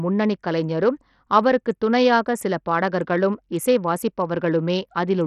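From start to finish the speech carries heavy codec damage, with nothing above about 14.9 kHz. The top end flickers in and out, and a gritty, grainy noise with aliasing clings to the sound. The likely cause is Bluetooth SBC compression at a starved bit pool, consistent with roughly 64 kbps, where the weaker upper sub-bands lose their bits and the rest are coarsely quantised. A spectrogram shows a hard ceiling at 14.9 kHz and patchy, blocky high bands below it.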